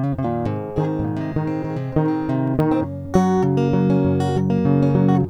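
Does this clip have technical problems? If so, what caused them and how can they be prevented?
Yes. CD scratch ticks appear from 2.35 to 2.73 s in this music: four brief clicks, each under a millisecond, roughly eight per second. A scratch destroys more data than error correction can rebuild on each disc rotation, so the player interpolates or mutes those samples. Cleaning or resurfacing the disc, or ripping with a secure, re-reading ripper, prevents this.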